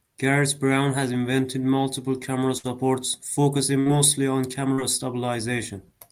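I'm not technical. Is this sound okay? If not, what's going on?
No. Twice, at 2.57 to 2.66 s (just after "has invented multiple camera") and at 3.80 to 3.88 s, there is a burst of packet loss: several pieces of the call arrived too late or not at all. Each time, the receiver stretched the last bit of sound for about 60 ms while turning it down, so you hear a brief held, fading sound. When the speech resumes, about 60 ms of it is simply gone.

At 4.74 to 4.79 s there is a short concealed packet loss. A smaller piece of the call, about 40 ms, didn't reach the decoder in time. The receiver invented a stand-in by continuing the sound that came just before and then blending back into the real speech. The result is a quick smear or wobble rather than a clear gap, and a short sound in the speech there can disappear.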